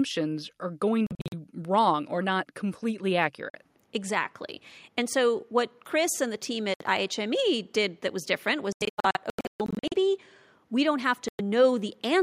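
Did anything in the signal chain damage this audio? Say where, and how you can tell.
Yes. The speech cuts abruptly to silence at 1.07–1.34 s, 3.50–3.55 s, 6.74–6.82 s, 8.72–9.94 s and 11.28–11.41 s, then resumes further on, as if it had kept playing underneath. The first and fourth are clusters of short holes, the longest 43 ms and 128 ms. Gap lengths come in steps of about 21 ms, which points to whole lost packets: a Bluetooth dropout on the wireless playback link is the likely cause.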